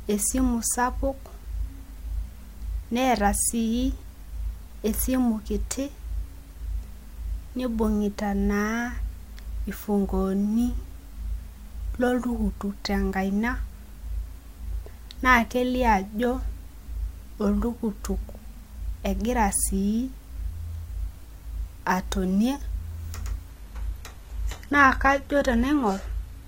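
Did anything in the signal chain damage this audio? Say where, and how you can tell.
Yes, it's network-side. At 23.50 s the adaptive stream drops to a lower bitrate with no gap: treble abruptly drops, with nothing above about 14.9 kHz, consistent with low-rate HE-AAC.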